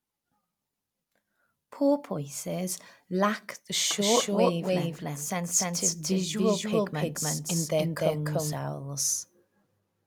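From about 3.99 s, right after "lack the", a doubled audio track kicks in: a dry, equally loud copy trails roughly a third of a second behind, likely from a second, slower capture path. It appears and vanishes abruptly, dropping out at 8.53 s.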